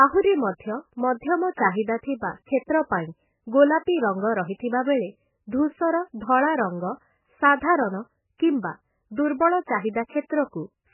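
From start to finish the speech has nothing above 3 kHz and a watery, swirling flutter, the signature of heavy MP3 compression, likely at a very low bitrate around 8 kbps. Unlike a plain low-pass filter, weak frequency components flicker on and off between frames and attacks smear.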